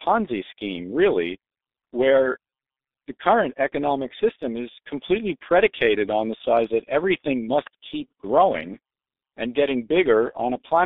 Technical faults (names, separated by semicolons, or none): G.723.1 codec